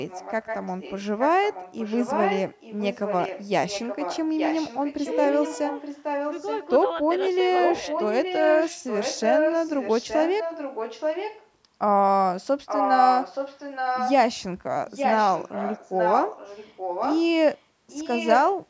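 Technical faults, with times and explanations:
0.08–3.47, 3.68–5.16, 5.35–6.67, 7.59–11.49, 12.66–14.13, 14.87–17.27, 17.55–17.59 and 17.89–18.54 s, echo leak: a second copy of the speech trails the original by 873 ms and turns up across nearly the whole clip. Early on it sits about 10 dB down, climbs to about 5 dB below the speech for most of the rest, roughly matches the speech level at 12.66–14.13 s, and is barely there in the short 17.55 s blip. The likely cause is a far end on a loudspeaker whose echo canceller let part of its microphone pickup slip back into the call.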